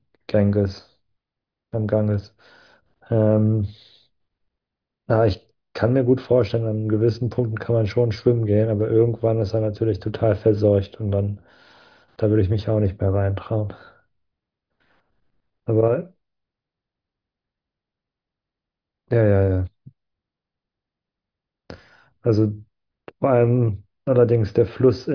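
Nothing technically wrong turns up anywhere in this speech recording, so there are no faults, times or causes to report.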